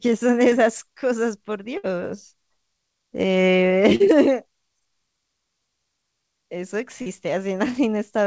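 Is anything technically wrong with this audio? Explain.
Yes, the speech has four dropouts from lost call audio.

Short concealed packet loss at 0.50 to 0.54 s, 3.95 to 4.02 s and 7.02 to 7.08 s: up to 40 ms never arrived, so the receiver extended the preceding sound and blended it back into the real audio. Each is a brief smear or wobble.

Burst of packet loss at 1.78 to 1.85 s: about 60 ms was lost in a row. The receiver held the last sound and faded it, leaving a short buzz or hiss before the speech resumes with that stretch gone.

Nothing is heard above 8 kHz, which fits a wideband G.722 call path.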